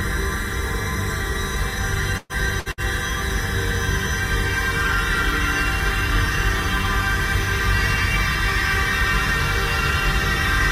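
At 2.17 s a burst of packet loss removes about 120 ms of audio, and two shorter bursts follow at 2.59 s and 2.72 s, each losing about 60 ms. In each gap the receiver repeats the last sound it had and fades it, so the sound turns into a brief dying hiss before jumping ahead. A spectrogram shows smeared, repeated frames decaying in level, then an abrupt change where the audio resumes.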